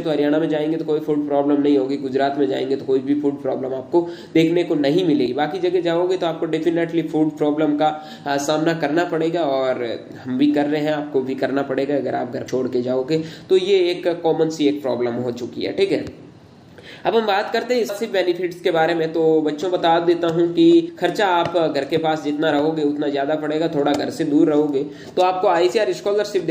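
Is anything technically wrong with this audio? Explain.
Yes. Damaged data in a compressed stream causes five brief glitches, at 5.25, 12.47, 17.88, 20.88 and 25.71 s. Each lasts under 20 ms. Corrupted bytes make the decoder misread frames and lose sync. It then hunts for the next frame header. Each event is heard as a short click or dropout.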